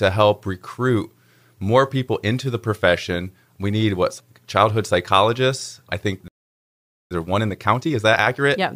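At 6.28 s the speech cuts out for about 0.83 s until 7.11 s, a playback stall most likely caused by the player running dry, unlike a dropout. From 7.11 s to the end, time-compressed catch-up runs the speech at 1.25 times normal speed, hurried yet unchanged in pitch, which sets it apart from a sample-rate error.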